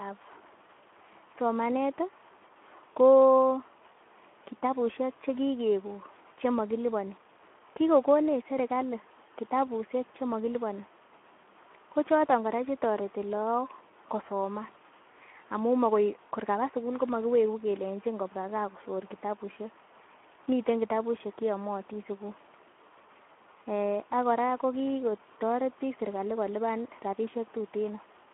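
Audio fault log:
throughout, Speex codec: the speech has passed through a narrow telephone-style line of about 200 Hz to 3.4 kHz and then a Speex CELP encoder starved of bits, which fits a bitrate around 11 kbps. The encoder has too little data to model the excitation behind each sound, so the voice comes out plainly rough, grainy and hoarse. With nothing above 3.8 kHz, sibilants and consonant edges are dulled and the whole clip sounds boxed-in and muffled.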